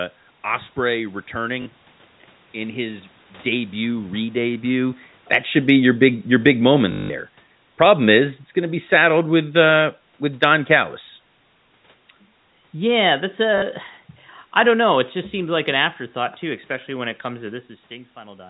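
At 1.62 s a brief robotic stutter runs through the sound for about 40 ms. This is packet loss with the last packet repeated: the receiver replayed its final good packet to fill the gap, and each copy lands out of step with the pitch. From 3.46 s, just after "in his", the level sinks steadily until 10.75 s, losing about 8 dB as the automatic gain falls. The gain control judged the input too loud, or its background noise too strong, and pulled its gain down gradually, taking the background down with it. At 6.92 s a longer stutter lasts 180 ms and buzzes at roughly 50 Hz, which fits repeated 20 ms packets. From 12.75 s a second, gentler automatic gain fall of about 4 dB runs to 16.44 s, beginning just before "especially when it comes". During that fall, at 13.58 s, another 40 ms packet-loss stutter passes briefly.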